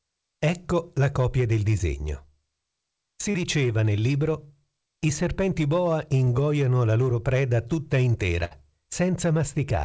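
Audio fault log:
1.78–1.81 s, 3.31–3.36 s and 6.24–6.28 s: short concealed packet loss. Each time a brief stretch never made it to the decoder, about 20 ms, 40 ms and 20 ms. The receiver papered over it by extending whatever was sounding and then blending back in, so you get a quick smear or wobble rather than a dropout. The middle one is longest.
8.44–8.53 s: burst of packet loss. Here about 60 ms went missing in one go, too much to hide cleanly. The receiver kept the last sound going while fading it down, so it comes across as a short held buzz or dying hiss. The audio then picks up further along, with that chunk simply gone. It all rides on a call path band-limited to nothing above 8 kHz.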